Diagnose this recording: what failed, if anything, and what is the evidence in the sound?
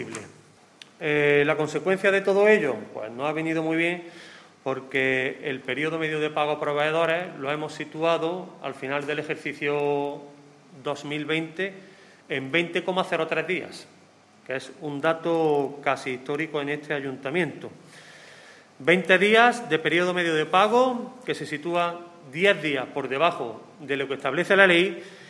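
The fault sits in sample-rate conversion: the resampler restarted on every block. Across the whole recording a faint tick repeats 20 times per second, a buzz-like grain that rides on the sound and vanishes in gaps. The bandwidth points to a conversion from 48 kHz down to 24 kHz, run on 50 ms blocks. Each block was converted in isolation, so its edges lacked true neighbouring samples. A spectrogram shows thin vertical lines every 50 ms; the waveform shows small discontinuities at each block boundary.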